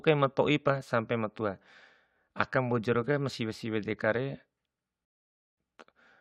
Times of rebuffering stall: 5.05-5.57

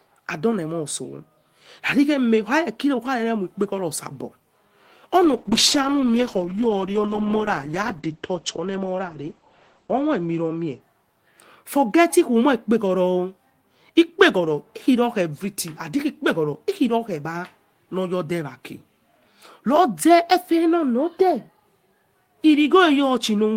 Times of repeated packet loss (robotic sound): none

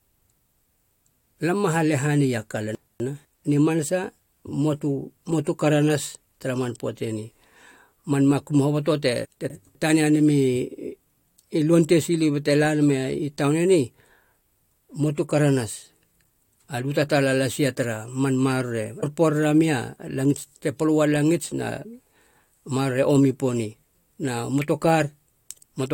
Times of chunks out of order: 2.75-3.25, 9.25-9.75

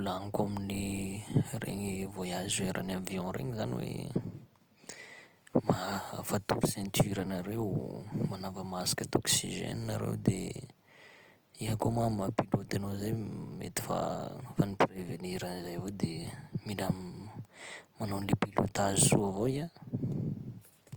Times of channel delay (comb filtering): none

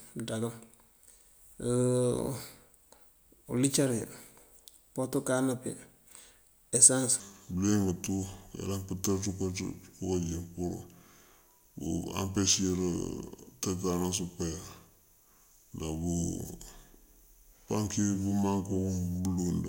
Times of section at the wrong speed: 7.20-19.68

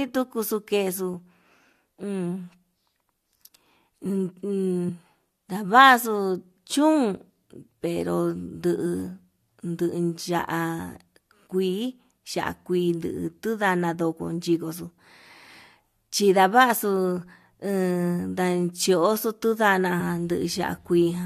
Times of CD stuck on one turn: none

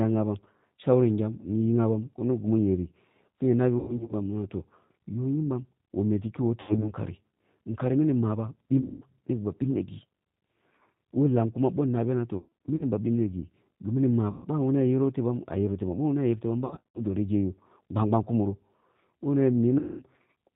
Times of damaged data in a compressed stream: none

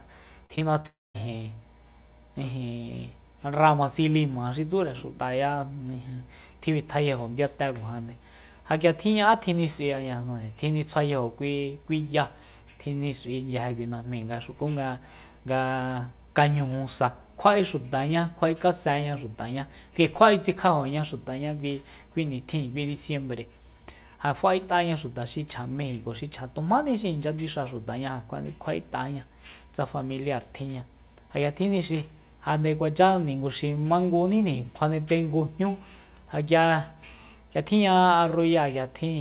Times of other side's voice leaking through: none

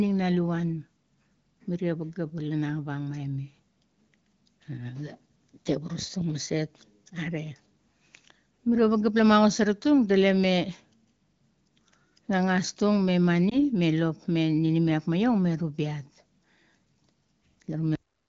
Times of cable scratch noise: none

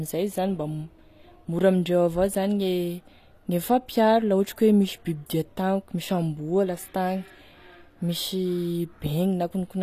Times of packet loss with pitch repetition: none

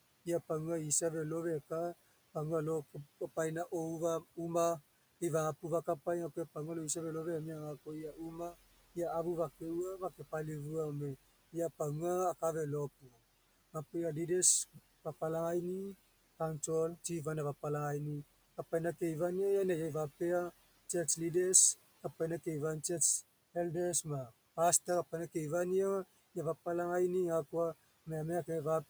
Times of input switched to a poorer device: none

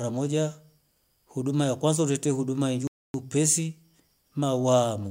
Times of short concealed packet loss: none

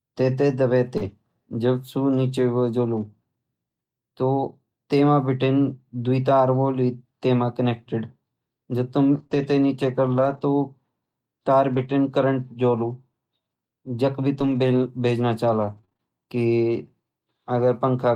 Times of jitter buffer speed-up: none

